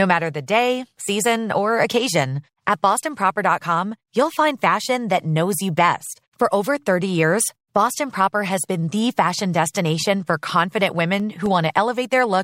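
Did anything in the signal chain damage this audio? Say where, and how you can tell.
Yes. From 11.20 to 11.73 s, playback adds three ticks, the longest about a millisecond, evenly spaced at roughly four a second. These are CD scratch ticks: a disc blemish exceeds error correction once per revolution, so samples are concealed. Their steady rhythm distinguishes them from irregular buffer-underrun clicks.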